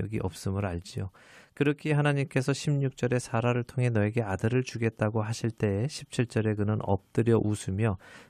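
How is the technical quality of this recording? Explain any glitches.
No technical faults are audible.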